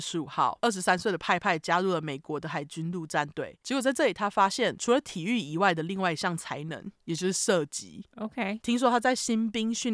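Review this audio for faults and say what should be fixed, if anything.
No faults can be heard anywhere in the recording. Nothing needs to be fixed.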